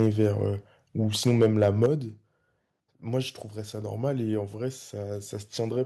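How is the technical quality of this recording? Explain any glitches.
The recording has a couple of distortion patches and one sudden level drop. From 0.00 to 0.26 s and again from 1.26 to 1.86 s the loudest peaks crackle harshly, likely microphone overload: input pushed about 2 dB, then about 4 dB, past the converter's ceiling, flattening the tops of a small share of samples. Right after that, at 1.86 s, everything drops by about 7 dB at once, likely the microphone volume stepped down as the call software reacted to the clipping and cut the input gain.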